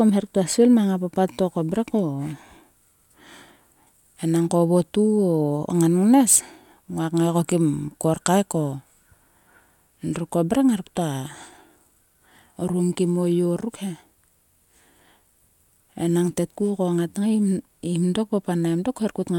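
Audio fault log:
No faults can be heard anywhere in the speech. The audio holds steady over its whole length.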